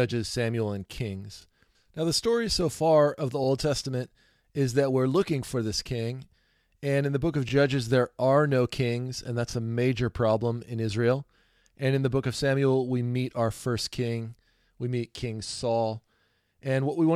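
Overlapping chunks at 1.42, 3.44, 5.46, 7.49, 9.51, 11.53, 13.56 and 15.58 s: each 2 s chunk starts 23 ms early, so that sliver replays as a quick stutter.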